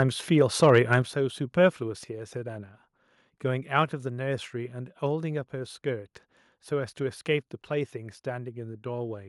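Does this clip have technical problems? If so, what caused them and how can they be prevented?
Yes. Right at the start, around 0.0 to 0.03 s, and again from 0.41 to 0.78 s, the loudest peaks get a harsh, crackly edge. That's microphone overload: the input was most likely set a touch too hot, so the tops of the waveform ran into the converter's ceiling by about 1 dB and got sliced flat. Only a small share of the samples is affected, but you can still hear it on those peaks. Backing off the mic's input gain a few dB, or moving slightly away from the mic, would keep the peaks below full scale.

Then at 1.02 s everything, voice and background together, drops abruptly by about 5 dB. That's the microphone volume stepped down, likely the call software reacting to those clipped peaks just before it and pulling the device's input level down in one jump instead of easing it. Setting a sensible input level up front and turning off the app's automatic mic level adjustment would prevent that sudden step.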